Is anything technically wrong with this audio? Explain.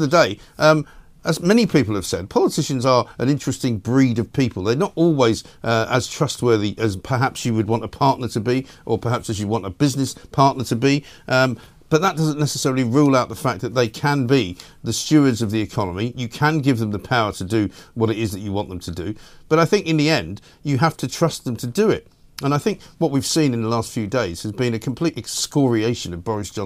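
No, nothing technically wrong can be heard here.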